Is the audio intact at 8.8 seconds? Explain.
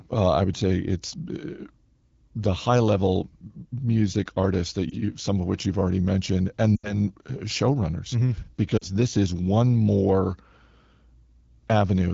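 No. From 8.77 to 8.84 s the speech drops to near silence, a 40 ms gap before "this is one more", which comes back weak or rough for a moment. These are lost AMR speech frames. Radio errors left frames that failed their checks, and the AMR-WB decoder, running at 12.65 kbit/s, concealed the gap by repeating the last good pitch and vocal-tract settings at falling gain. The 40 ms span fits two 20 ms frames.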